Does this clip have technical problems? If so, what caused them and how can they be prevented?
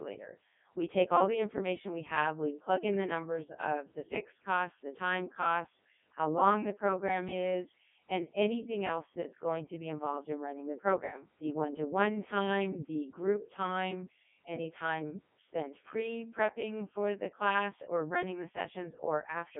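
Yes. Throughout, a channel delay of around 20 ms, summed to mono, causes comb filtering. It makes the speech rough or slightly doubled, with evenly spaced notches from about 30 Hz appearing as fixed horizontal stripes on a spectrogram. Prevent it by time-aligning the channels before any mono fold-down.

The Codec 2 vocoder rebuilds the speech from pitch, energy and envelope rather than the original waveform. It sounds heavily buzzy and robotic, which fits its 3.2 kbit/s mode, and the spectrogram is empty above 3.7 kHz. Prevent it by using a higher-rate waveform codec wherever the link allows.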